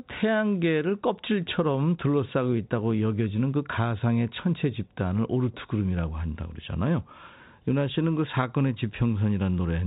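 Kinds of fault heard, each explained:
No faults can be heard in the speech. It has gone through G.711 telephone coding, consistent with the A-law variant at 64 kbps, so nothing above 4 kHz comes through and any quantisation noise stays at most faint beneath the voice.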